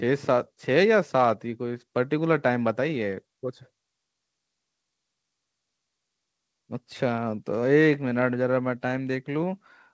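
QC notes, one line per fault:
No faults found in this speech.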